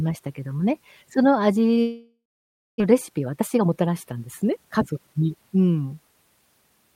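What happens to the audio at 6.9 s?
Nothing goes wrong at 6.9 s: the audio plays through intact right to the end of the clip, with no dropout, click or distortion at that point.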